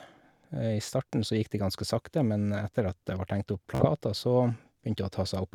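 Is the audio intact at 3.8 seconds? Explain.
No. From 3.75 to 3.85 s there is a Bluetooth stutter: packets arrived late or not at all, so the receiver replayed its last short slice, giving a brief machine-gun buzz. About 46 ms of speech is lost. Unlike a plain dropout, the gap fills with repeats rather than silence.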